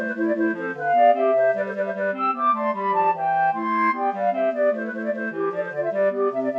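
From start to finish, the clip has a wrong sample rate fault. Everything plays too fast and too high. The speed-up is 1.5 times, and pitch rises by about 7 semitones, close to a perfect fifth. Both shift together because the samples were never converted. They are simply clocked out faster than they were captured. The ratio points to audio recorded at 32 kHz and played at 48 kHz. The sound comes across as bright, squeaky and rushed.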